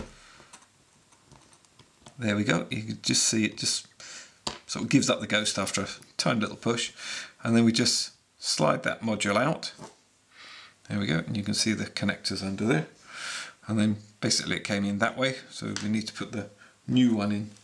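No dropouts, clicks, distortion, level jumps or timing glitches turn up anywhere in the audio.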